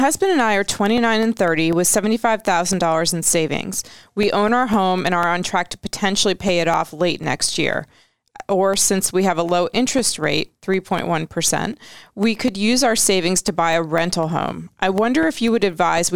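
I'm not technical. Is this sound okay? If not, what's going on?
No. The clip has periodic USB or driver dropouts from 0.73 s to 15.98 s. Four times a second, every 0.25 s, a tiny slice of the speech, about a millisecond, goes missing and is replaced by silence. This happens when something else on the computer briefly blocks the USB connection or audio driver on a fixed schedule. Each gap sounds like a small tick, and you hear them as a steady ticking whenever there's sound.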